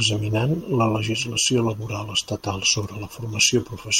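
From 0.15 s to 3.96 s the speech carries clock slip clicks, faint ticks roughly every 70 ms, around seventy of them, blurring into a soft rattle. Each is one sample dropped or repeated, likely from two unsynced clocks drifting a few hundred parts per million apart.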